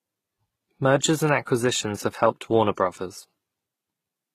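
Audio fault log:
Throughout: transcoding between lossy codecs. The speech carries two layers of coding artefacts at once, likely from an HE-AAC encode near 20 kbit/s re-encoded as Vorbis near 60 kbit/s. On a spectrogram, nothing appears above 14.9 kHz.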